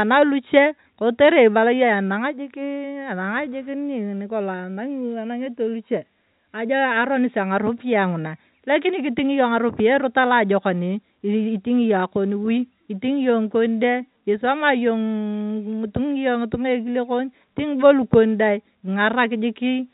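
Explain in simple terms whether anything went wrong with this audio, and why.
Nothing went wrong here; no faults can be heard.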